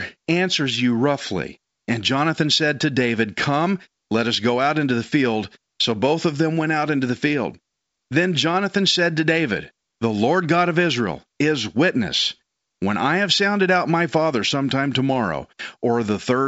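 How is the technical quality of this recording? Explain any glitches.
No glitches: the speech is standard G.722 wideband telephone coding at 64 kbit/s, band-limited with nothing above about 7.7 kHz, and any coding trace is faint at most.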